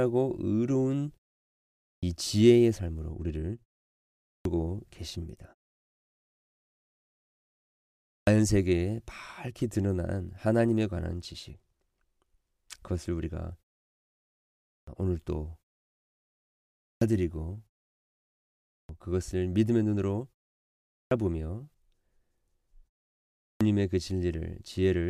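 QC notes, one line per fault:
1.82, 4.22, 8.04, 14.65, 16.78, 18.66, 20.88 and 23.38 s: clipped start after a pause. After each pause of 0.57 to 2.58 s, the first 0.21 to 0.23 s of speech is lost while the output device wakes. Words start abruptly, missing their opening sounds.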